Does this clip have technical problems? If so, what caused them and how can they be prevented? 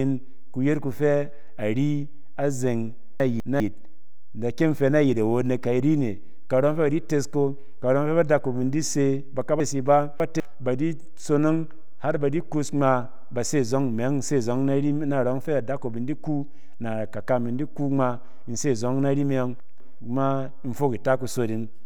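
Yes. The speech jumps and garbles at 3.2 to 3.6 s, 9.6 to 10.4 s and 19.6 to 20.0 s. These are chunks out of order: a 200 ms chunk played late, one chunk behind twice and three behind in the middle, leaving hard joins. Tagging chunks with sequence numbers and reordering them in a buffer before playback or writing prevents this.

A DC offset runs through the whole clip. It can't be heard directly, but a constant shift off zero wastes headroom and puts steady energy at the very bottom of the spectrum. A high-pass or DC-blocking filter at capture, or checking the converter's calibration, prevents it.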